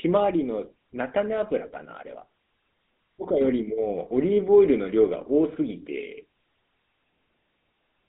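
From start to finish the speech runs through GSM full-rate coding, and it's plainly audible. The codec rebuilds each voice from a vocal-tract model excited by a sparse, regularly spaced pulse train, so instead of natural breath you get a buzzy, gravelly grain. The band sits roughly between 200 Hz and 3.7 kHz, with nothing above 3.8 kHz, which fits the old 13 kbps mobile standard.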